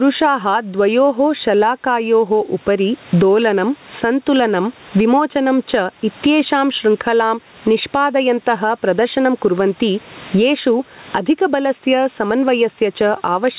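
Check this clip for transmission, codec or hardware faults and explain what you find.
One fault runs through the whole recording: gain pumping on the speech.

It is present from start to finish. The level swings by around 20 dB. The likely cause is microphone gain set far too high, with a fast limiter or compressor clamping down on every loud syllable and releasing in the gaps. The result is a breathing, squashed sound with little difference between loud and soft passages.

The room noise itself sits about 38 dB below the speech. The band ends at 4 kHz, which points to a G.711 mu-law call path at 64 kbps.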